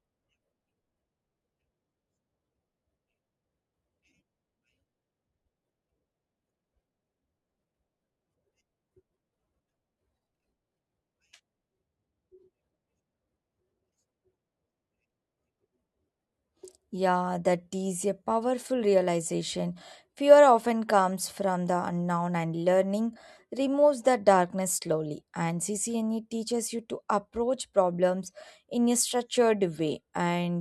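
No audible faults in this recording.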